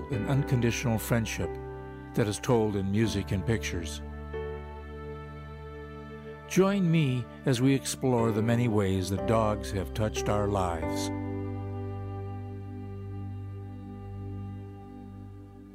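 Video or display buzz runs throughout the clip: a screen or video cable is coupling into the audio path, putting a steady buzz at the 75 Hz field rate, with a layer of fine hash above it, underneath the sound at roughly 40 dB below it.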